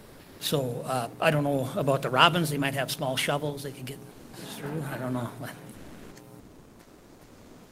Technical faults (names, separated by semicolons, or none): comfort noise in place of the background